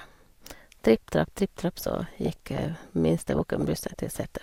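A speech recording with two passages of DAB burbling, from 1.74 to 2.66 s and from 3.30 to 4.18 s, where short noise blips sit over the voice. Weak reception is letting bit errors, roughly 0.7 and 1.0 percent, slip past error correction into the MP2 data, so wrong samples put short blips of noise into single sub-bands. A spectrogram would show scattered rectangular blocks flashing on and off across frequency bands.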